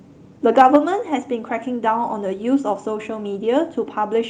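From 0.57 to 0.76 s the loudest peaks crackle harshly, likely microphone overload. The tops are driven about 4 dB past the converter's limit and sliced flat, which gives a grittier sound than smooth compression. At 0.76 s speech and background drop together by about 4 dB in one jump, not a gradual fade, likely as the microphone volume is stepped down right after the distorted peak.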